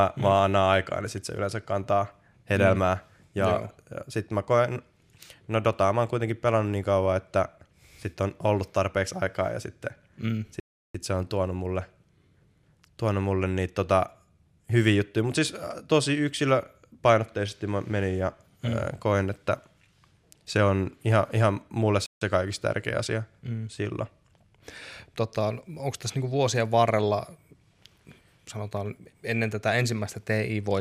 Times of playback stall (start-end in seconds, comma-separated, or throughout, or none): 10.60-10.95, 22.06-22.21